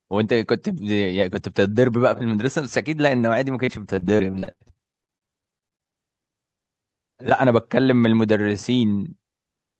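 Repeated packet loss (robotic sound) runs from 3.65 to 5.94 s: around 28 short holes, none longer than 50 ms, each patched by stretching the previous sound, so roughly a quarter of the stretch turns choppy over the call path's 8 kHz band.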